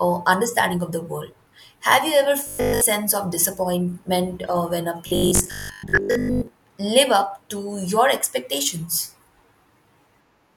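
A speech clip with robotic sound from repeated short buffers in two spots: 2.47 to 2.81 s, right after "you ever", where it's entirely repeated, and 5.07 to 6.47 s, after "disappointment uh when a", mostly repeated. Both carry a 50 Hz metallic buzz, likely from starved audio looping a 20 ms chunk.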